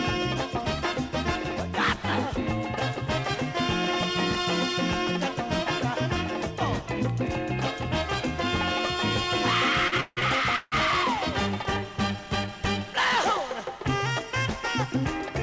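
The audio reaches the listener through a WebRTC call path whose band stops at 8 kHz, consistent with G.722 at 64 kbps, and it shows two timing faults. From 9.88 to 10.74 s there are repeated stalls (stutter): five times the jitter buffer runs dry because packets arrive late, and the receiver stretches the last sound to bridge each hole. The longest is about 162 ms. About 400 ms in total is filled this way, close to half the span, so nothing is lost but the passage drags and judders. From 12.16 to 12.52 s a jitter buffer slow-down follows. The receiver repeats short pitch-period segments to rebuild its reserve, adding 40 ms and running that stretch at 91% speed. Pitch is unchanged, but the sound is audibly drawn out.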